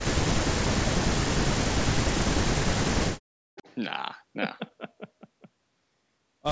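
Speech suppressed in double talk occurs from 0.09 to 0.9 s, from 1.34 to 2.45 s and briefly from 3.19 to 3.41 s. In each stretch the speech sinks sharply or drops out in pieces, at its deepest by roughly 40 dB. The likely cause is an echo canceller on a call that heard both sides talking at once. It could not tell this talker from the returning loudspeaker sound, so it turned everything down.

Echo leak follows from 3.55 to 3.75 s. A faint, delayed copy of the speech slips through, arriving 380 ms late and sitting roughly 20 dB below the direct sound. The likely cause is a loudspeaker at the far end whose echo canceller failed to strip all of the pickup from its microphone, so a fragment was sent back. The call's microphone processing leaves nothing above 8 kHz.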